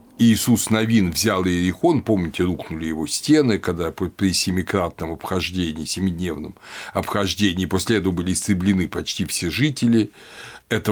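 Nothing in this recording of speech stood out as a technical problem on listening.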